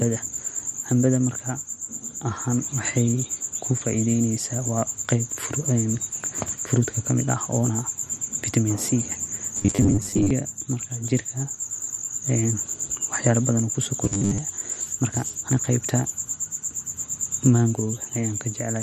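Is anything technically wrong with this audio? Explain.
Yes. The speech turns robotic twice, from 9.57 to 10.31 s and from 14.04 to 14.38 s, as a rigid, metallic buzz at 100 Hz that follows the original only loosely. This is robotic sound from repeated short buffers, likely caused by audio arriving too seldom so that the last 10 ms is replayed to fill the gap while real audio is skipped. Roughly half of the first stretch and most of the second is repeated material.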